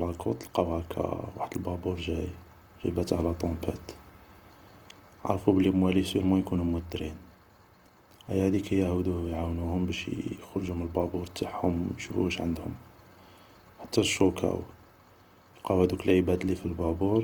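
Plainly audible Opus compression runs through the whole speech clip, likely from an encode in the music-oriented mode at a low rate, which fits something near 24 kbps. Band energy survives up to about 20.2 kHz, but the filled-in bands leave things grainy, rough and noisy.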